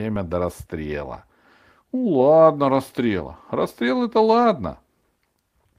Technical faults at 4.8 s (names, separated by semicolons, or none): none